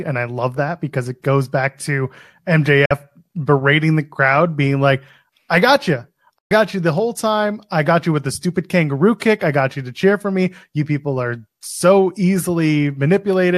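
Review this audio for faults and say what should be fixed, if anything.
Two digital broadcast dropouts: 2.86 to 2.91 s, just before "berating the crowd being", and 6.38 to 6.51 s, between "like I got you" and "you the whole time". The receiver lost frames and muted with a 3 ms fade, dropping about 48 and 120 ms of speech. Better reception, like a well-placed antenna, would prevent it.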